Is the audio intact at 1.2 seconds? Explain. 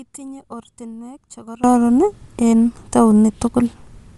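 No. From the start to 1.64 s, one channel was likely inverted in polarity, so summing to mono cancels the shared content. At 1.2 s the speech drops by about 21 dB and is only a faint leftover of the channel difference. Throughout the clip, including at 1.2 s, the signal was likely coded with Bluetooth LC3 compression at 48 kbps. It gives the speech a grainy, breathy edge with noise-filled upper bands, and there is nothing above 11.5 kHz.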